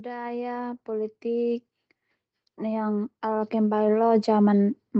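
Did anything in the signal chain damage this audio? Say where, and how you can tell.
Yes, automatic gain rising in the call processing: the speech and background swell together from 0.05 to 1.7 s, about 6 dB, then from 2.4 to 4.81 s, about 9 dB.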